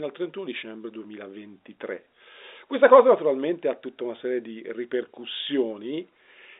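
No technical faults are audible in the speech, which carries the narrow 250 Hz to 3.7 kHz band of an ordinary G.711 telephone line, with any coding noise from the line faint at most.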